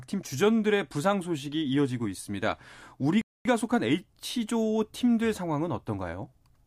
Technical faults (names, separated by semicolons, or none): rebuffering stall